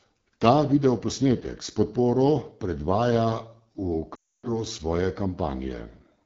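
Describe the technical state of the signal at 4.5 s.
At 4.5 s the signal is inside a run of lost AMR speech frames, 4.15 to 4.57 s. The decoder repeats the last good pitch and vocal-tract settings at falling gain, so sound drops to near silence within two frames. Underneath, the AMR wideband (HD Voice) codec at 8.85 kbit/s, one of its lowest rates, gives speech a plainly rough, raspy texture.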